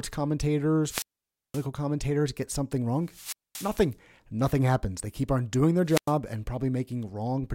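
At 0.84 s a wireless microphone squelch dropout begins. Hiss swells, then the speech cuts to near silence for about 0.52 s before returning by 1.66 s. The FM signal faded and the receiver muted. It recurs at 3.03 to 3.88 s, with about 0.23 s muted, and at 5.85 to 6.15 s, with about 0.1 s muted.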